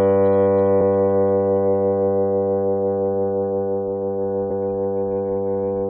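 Damaged data in a compressed stream causes brief blips at 0.80 s and 4.49 s. Corrupted bytes in the encoded file make the decoder misread those frames and lose sync while it hunts for the next valid frame header, leaving a brief glitch in the sound each time.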